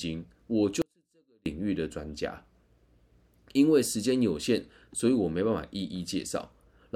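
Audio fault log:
0.82–1.46 s, audio dropout to a faint residue: the signal path likely lost its feed for 0.64 s while the chain after the break stayed live, so the speech cuts out abruptly and the gap holds only faint sound about 40 dB below normal level.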